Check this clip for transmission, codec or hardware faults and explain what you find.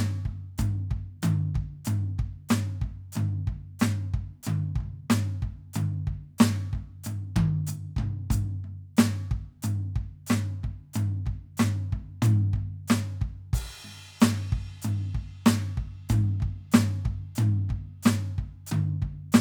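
The music comes through with nothing audible that points to a transmission, codec or hardware problem.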